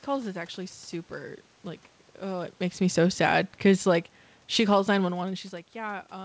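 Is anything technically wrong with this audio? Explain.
Yes, there's one real problem: the automatic gain falling. From 2.8 s to 5.35 s the level sinks by about 5 dB, and the room noise drops right along with the speech, which tells you it's the gain control pulling back rather than anything acoustic. It decided the input was too loud, or that the background noise was too strong for the gain it started with, and eased its gain down over those two and a half seconds. The talker shifting position around two and a half and around five seconds is just movement. The call path leaves nothing above 8 kHz, which fits G.722 at 64 kbps.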